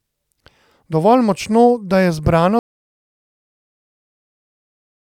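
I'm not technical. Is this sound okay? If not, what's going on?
No. There is an audio dropout to silence starting at 2.59 s and lasting to the end of the clip. Partway through the speech, the sound stops abruptly and becomes dead silence, with not even the faint background hiss or room sound you would normally hear between words. That complete silence suggests the recording lost its input, most likely from a disconnected microphone, a dropped connection or an accidental mute, and went on recording nothing. Whatever was said after 2.59 s is lost.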